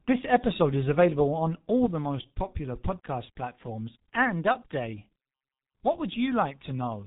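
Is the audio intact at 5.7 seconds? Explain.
No. At 5.7 s the audio is still inside a sudden gain jump that began at 1.86 s, just after "is available on all", and lasts to the end of the clip. The level drops by about 6 dB in a single step, and the speech and the background noise fall together with no fade. That points to the gain being switched from one sample to the next without a ramp, likely a changed setting or a one-bit shift in the digital path.

The same moment also carries the G.723.1 codec damage heard throughout. This low-rate telephony coder works on 30 ms frames, and its heavy smearing fits a bitrate near 6 kbit/s. Nothing above about 3.8 kHz survives, so the speech sounds muffled and hoarse, with soft, blurred consonants. Its slowly updated model of the voice cannot follow quick changes in the speech, which adds a rough texture.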